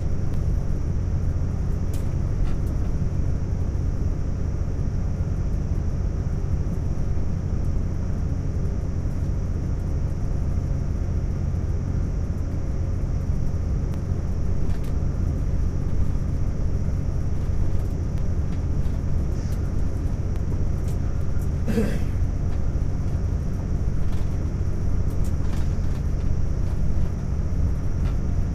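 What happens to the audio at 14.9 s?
At 14.88 s there is a sudden jump forward in the sound, a dropped buffer (overrun): roughly 20 ms was likely overwritten before being read, splicing the edges together.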